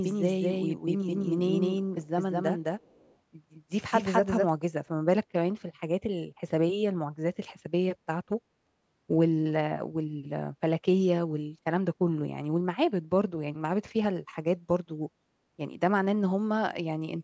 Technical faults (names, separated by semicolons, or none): doubled audio track; echo leak